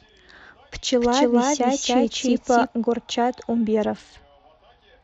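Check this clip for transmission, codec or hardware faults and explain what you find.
Two faults stand out: a doubled audio track in the first half and a Bluetooth SBC bit pool drop near the end.

From 1.01 s to 2.67 s the speech is heard twice, with a second copy trailing around 300 ms behind and at roughly the same loudness. The echo is dry and full-band, with no room decay, and it appears and vanishes abruptly at those points. This is a doubled audio track, likely from the signal being captured again through a slower path or from an edit leaving two misaligned copies.

From 3.95 s to the end, the speech turns dull, losing its treble, and a gritty, grainy noise rides on what remains. This is a Bluetooth SBC bit pool drop. A congested wireless link pushed the encoder to spend far fewer bits, which fits a bit pool falling from 31 to 9, around 72 kbps. The highest sub-bands are starved and the lower ones are quantised coarsely, and the audio does not recover before the clip ends.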